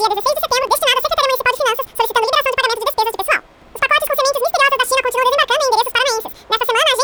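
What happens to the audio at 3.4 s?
At 3.4 s the audio is affected by the fault running through the whole clip: audio read two samples at a time (double speed). The reader treats each pair of samples as a single frame, so everything plays twice as fast and a full octave (12 semitones) higher.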